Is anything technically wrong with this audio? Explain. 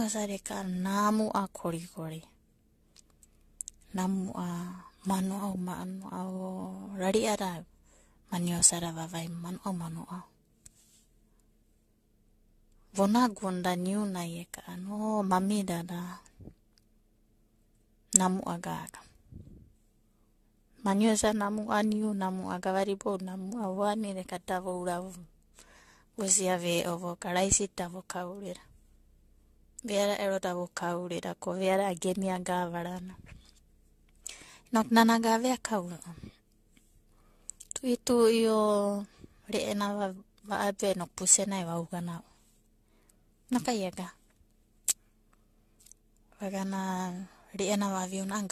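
Yes. Generation loss runs through the whole speech clip. The likely cause is repeated lossy encoding, consistent with AAC-LC at around 64 kbit/s applied perhaps five times over. Each fresh pass requantises the signal on a shifted frame grid, so coding noise and spectral gaps pile up rather than staying fixed. The result sounds swirly and hollow, with smeared, softened consonant attacks, and nothing is present above 14.1 kHz.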